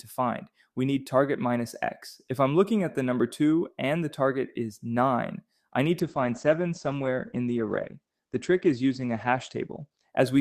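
From 6.0 s to 10.17 s the sound turns dull and coarse: the top end above 8 kHz vanishes, and what remains sounds rough and watery for about 4.1 s. This is a call bitrate drop. The encoder was pushed from a rate that sounds like about 128 kbps down to what fits roughly 13 kbps, so it codes far more crudely and narrows its bandwidth from 20 kHz to 8 kHz.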